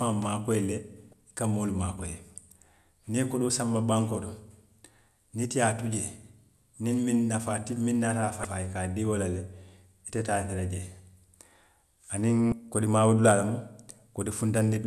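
Damaged data in the compressed stream causes brief glitches at 1.10–1.13 s, 8.41–8.45 s (just before "i ka a dii") and 12.49–12.52 s, where the decoder loses frame sync.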